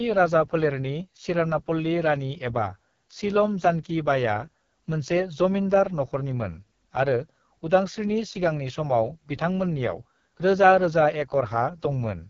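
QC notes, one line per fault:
throughout: AMR wideband (HD Voice) codec, heavily degraded. The speech has the rough, raspy grain of AMR-WB at one of its lowest modes, consistent with a rate around 6.6 kbit/s. At that rate the pulse-excited vocal tract model has too few bits to shape each voice cycle, so tone turns coarse and raspy. Nothing is present above about 7.5 kHz, and the top band sounds like shaped noise rather than real detail.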